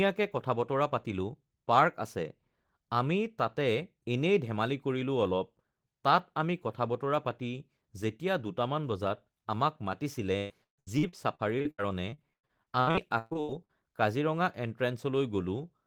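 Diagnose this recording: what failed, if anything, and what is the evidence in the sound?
Repeated packet loss (robotic sound) runs from 10.37 s to 13.71 s and is a network-stage failure. Over that 3.3 s stretch the speech breaks into a rapid train of short holes, the longest about 135 ms, and roughly a third of the span is concealment rather than real signal. Each missing piece is patched by stretching the preceding sound, so the speech turns choppy, with fragments audibly absent.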